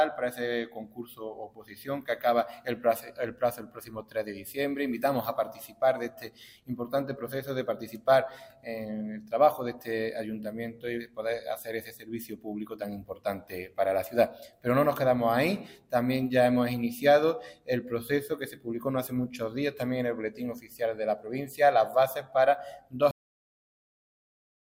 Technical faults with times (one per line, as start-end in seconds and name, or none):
23.11-24.77 cut-off end